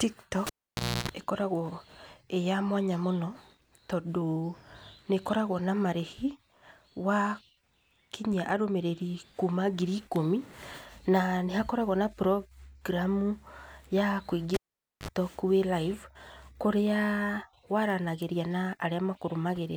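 Speech clip with a cable pulled and plugged in twice. At 0.47 s a pop drops the sound out for about 576 ms, then a 297 ms burst of 60 Hz mains buzz as the plug tip touches first, and another pop at 1.09 s when it seats. At 14.54 s it happens again, with a 492 ms gap and a short 50 ms buzz, this time at 50 Hz, before the sound returns at 15.08 s, right before "wĩ live kũrĩa".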